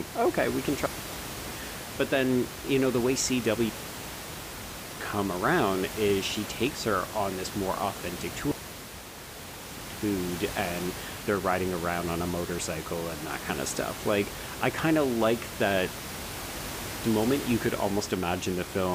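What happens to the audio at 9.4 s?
At 9.4 s the speech sits inside a digital wireless dropout running from 8.51 to 9.82 s. The receiver lost too much data from the link and muted for about 1.3 s, leaving a clean hole of near silence. Unlike an analogue dropout, no noise burst or hiss surrounds the gap.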